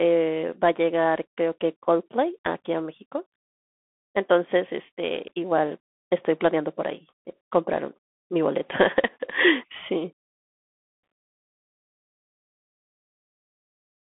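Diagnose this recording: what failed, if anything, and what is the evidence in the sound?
Throughout the speech, the sound is boxy and narrow, with a granular hiss under it and scratchy, smeared s sounds. The line band runs from about 200 Hz to 3.5 kHz, and nothing gets through above 3.8 kHz. This points to the codec stage, specifically the Bluetooth CVSD headset codec, consistent with a 64 kbps stream. Each sample is coded as a single up-or-down bit with an adapting step, and loud high-frequency energy outruns that step, causing the plainly audible distortion.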